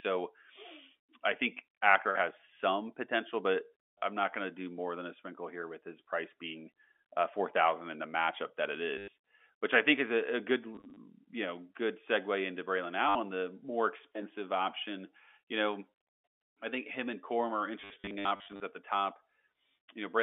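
Packet loss with the last packet repeated breaks up the speech at 3.98–4.02 s (after "has some potential but"), 8.98–9.08 s, 10.75–10.97 s (before "know good segue into"), 13.09–13.15 s, and worst at 17.8–18.6 s, just before "at the top". Lost stretches were filled by replaying the previous packet. Since the repeats ignore pitch, runs buzz near 100 Hz, which fits 10 ms packets. The result is a robotic stutter. The waveform shows identical repeated segments with steps at the joins. On the spectrogram, the G.711 telephone band, roughly 250 Hz to 3.5 kHz, shows frozen, smeared bands and vertical click lines.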